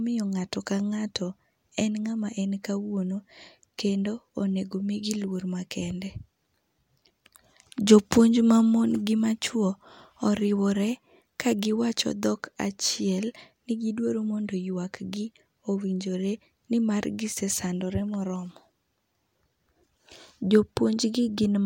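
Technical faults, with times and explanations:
No technical faults detected.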